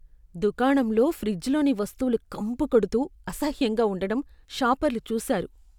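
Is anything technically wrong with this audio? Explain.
No, nothing is technically wrong with this audio.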